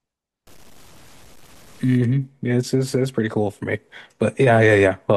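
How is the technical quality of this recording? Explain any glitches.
The recording has one glitch. From 0.47 to 1.97 s, likely low bit depth without dither: truncation to about 8 bits leaves error that tracks the speech, making quiet parts gritty and grainy.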